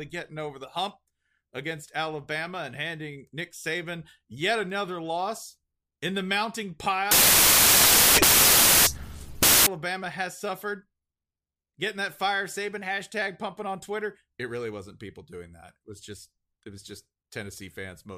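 From 7.11 to 9.67 s, right after "loss in the mounting", the samples are built from the wrong bytes: each value is assembled misaligned or byte-swapped, so the noisy low bits dominate. The speech is buried under loud, harsh broadband noise until "has suffered".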